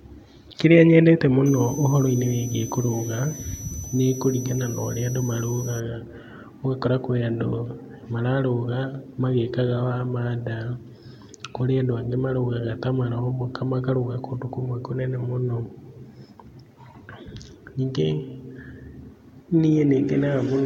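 From 1.46 to 5.80 s, a switching supply whistle sits under the speech. A power supply is running in an audible burst mode or beating with another one. It sounds like a thin, high whistle. Its pitch wanders between about 5.9 and 6.1 kHz, about 15 dB below the speech.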